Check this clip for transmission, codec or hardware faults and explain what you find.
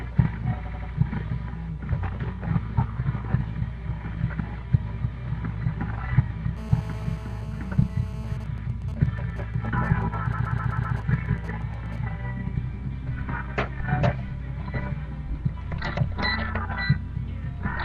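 Three kinds of fault are present: repeated frames at two points, a steady GSM phone buzz, and GSM signalling bursts.

Repeated frames occur from 0.64 to 0.90 s and from 10.32 to 10.96 s. A stretch of compressed frames was sent more than once, so the decoder replays it. In the first instance an 85.3 ms block plays three extra times, adding 256 ms. In the second a 128 ms block plays five extra times, adding 640 ms. Both are heard as a stutter. On a spectrogram they appear as identical tiled patterns with vertical lines at the joins.

GSM phone buzz runs from 6.57 to 8.37 s. A 2G phone in a call transmits 217 bursts per second, and the audio circuit rectifies them into a hard, raspy buzz at about 19 dB below the sound. A spectrogram shows a continuous comb of lines at 217 Hz and its harmonics.

GSM signalling bursts follow from 8.40 to 11.98 s, while the phone's user is silent in the call. 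The phone now sends only short groups of bursts, heard as even ticks with a longer 217 Hz buzz twice a second, at roughly 20 dB below the sound. The waveform shows spiky clusters, and the spectrogram shows broken vertical bands of harmonics.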